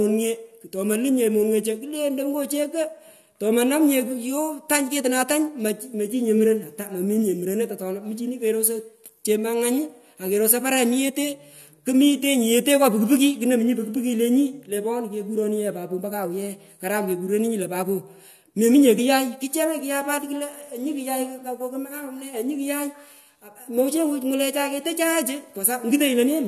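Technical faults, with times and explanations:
18.97 s, compressed frames skipped: about one 23.2 ms frame of the compressed speech is missing, so the audio jumps ahead roughly 20 ms. Overlapping neighbour frames smear the join into a brief blip. The waveform shows a smoothed phase jump, and the spectrogram a thin vertical seam without a sharp broadband click.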